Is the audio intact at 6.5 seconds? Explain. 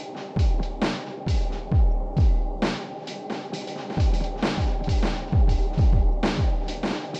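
No, at 6.5 seconds you're hearing a doubled audio track, running from 3.62 s to the end. A second full-band copy of the music trails roughly 0.7 s behind at about 5 dB down, dry and without decay, likely from a second, slower capture path.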